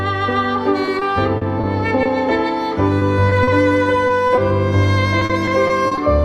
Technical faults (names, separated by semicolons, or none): repeated packet loss (robotic sound)